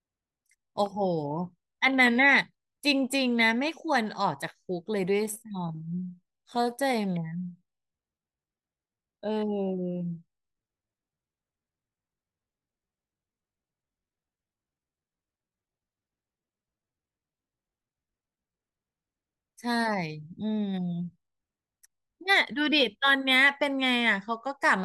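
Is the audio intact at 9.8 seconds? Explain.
No. A time-stretched section runs from 5.10 to 18.60 s, slowed to 0.70 speed. Pitch holds, but the speech drags, likely from repeated short pieces.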